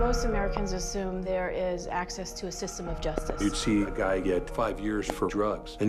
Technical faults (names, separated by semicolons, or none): loud pop